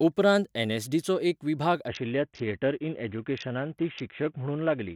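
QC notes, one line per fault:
1.88 s to end, Bluetooth SBC bit pool drop: the treble dulls abruptly and gritty noise rises over the speech for the rest of the clip, consistent with the bit pool dropping from about 28 to 5, near 54 kbps, starving the upper sub-bands and coarsely quantising the rest.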